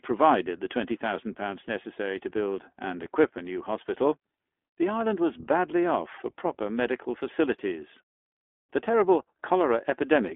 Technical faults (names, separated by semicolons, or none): iLBC codec; lost iLBC frames